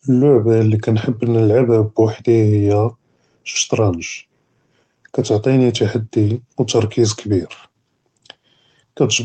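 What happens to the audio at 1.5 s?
Nothing goes wrong at 1.5 s: the speech runs on intact through that moment, with no dropout, glitch or distortion.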